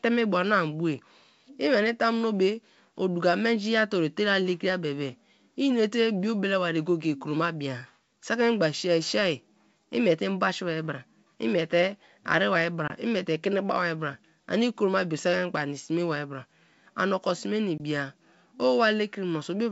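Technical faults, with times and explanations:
12.88 to 12.90 s and 17.78 to 17.81 s, packet loss on an ADPCM call: each time the speech drops into a hard-edged gap of about 20 ms, roughly one packet, and then comes back slightly distorted, with brief roughness. The lost packet was filled with silence, so the receiving decoder's adaptive predictor and step size stopped matching the sender's. It took some tens of milliseconds to realign, which is why the distortion fades rather than stopping abruptly.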